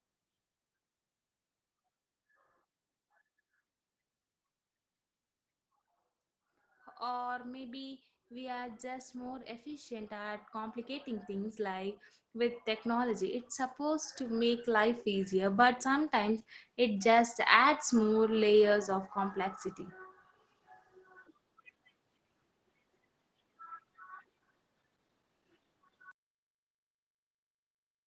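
Automatic gain rising runs from 6.99 to 15.69 s, just before "sometimes it just adds". The gain control judged the incoming level too low and pushed its gain up slowly, by about 18 dB over nearly nine seconds, so the speech and the background noise swell together. The creep is gradual rather than a jump. The whole clip stops at 8 kHz, which fits a wideband call codec such as Opus at around 20 kbps.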